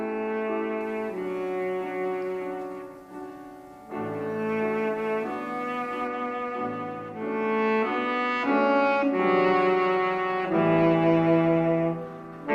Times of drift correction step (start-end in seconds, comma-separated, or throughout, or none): none